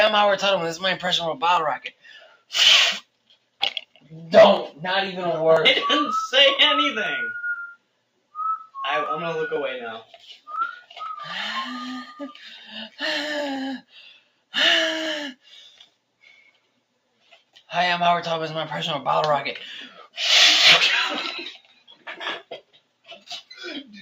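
Throughout, a noise suppressor applied to music or sounds treats sustained material as noise, so levels pump by around 10 dB and tails thin out. Sound cut by the noise suppressor hits hardest at 1.78–2.53 s, 3.01–4.11 s, 7.76–8.34 s, 10.05–10.47 s (about 13 dB), 13.82–14.54 s, 15.35–17.71 s, 19.89–20.17 s (about 17 dB) and 21.54–23.6 s. Held sound there sinks by up to about 18 dB while attacks survive.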